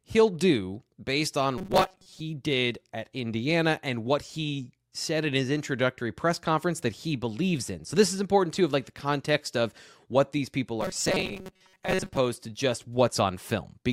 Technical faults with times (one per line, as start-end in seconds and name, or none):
1.58-2.20 robotic sound from repeated short buffers
10.81-12.17 robotic sound from repeated short buffers